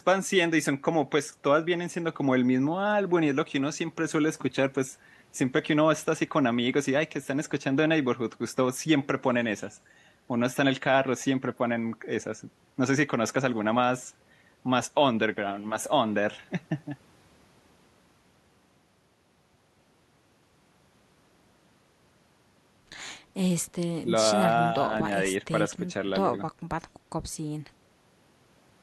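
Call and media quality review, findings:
No faults found in the speech recording. Nothing to escalate; ticket can be closed.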